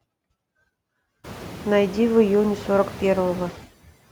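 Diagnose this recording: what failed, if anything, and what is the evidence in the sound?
Noise suppressor artifacts run through the whole recording, from the call-processing stage. The room noise jumps by about 24 dB at around 1 second, leaving it only about 17 dB below the speech. The suppressor pulls the noise down by about 17 dB in the gaps and then lets it swell back under each phrase. It decides frame by frame which bands are steady noise.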